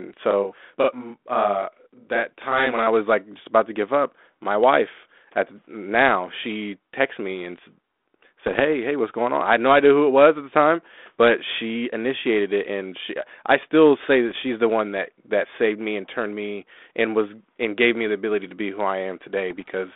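From 0.31 to 2.87 s there's a channel delay causing doubling: one side of the stereo pair runs 40 ms behind the other, and once they're folded to mono you hear both copies at equal strength. At 40 ms they don't quite fuse, so each syllable gets a quick slap right behind it, like the speech is standing in a small hard room or being said twice almost in unison.

Then come three bursts of bit errors on an ADPCM link, at 8.46 to 8.61 s, 14.29 to 14.45 s and 19.50 to 19.66 s, each lasting about 150 ms. The error rate is low, well under one percent, but because ADPCM only sends differences from its own running prediction, a flipped bit throws off the decoder's step size and predictor. So instead of a single click you get a pop followed by a few milliseconds of rough, gritty ringing with the level lurching briefly before it settles. The narrow telephone band around it, roughly 250 Hz to 3.6 kHz, fits a G.726 link at something like 32 kbit/s.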